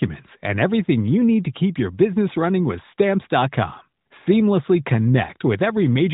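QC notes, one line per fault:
No faults detected.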